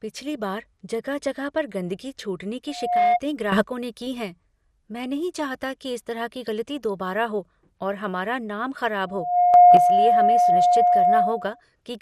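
MP2 compression runs through the whole speech clip from the start. Nothing is left above 14.4 kHz, and the damage is plainly audible: a dull top end with a gurgling, granular texture. This is likely MPEG Layer II coding at a rate around 80 kbps. There the encoder cannot feed all 32 sub-bands, so it switches the upper ones off, lets others flicker in and out, and quantises the remaining bands coarsely.

Loudspeaker feedback squeal first appears at 2.68 s, straight after "जगह पर गंदगी छूटने", and lasts to 3.2 s. A pure 715 Hz tone swells over about a third of a second to roughly 10 dB above the speech. The microphone was hearing its own loudspeaker, and at 715 Hz the loop gain passed one, so that frequency fed on itself and kept growing.

A sudden gain jump follows from 3.52 to 3.64 s. The speech and the background noise rise together by about 11 dB with no fade. The likely cause is a digital gain step applied from one sample to the next instead of being ramped.

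The 715 Hz feedback squeal returns at 9.07 s. It builds again over about a third of a second to roughly 10 dB above the speech and holds until 11.61 s.

Inside that squeal, a second sudden gain jump of about 7 dB lifts everything abruptly from 9.54 to 9.77 s.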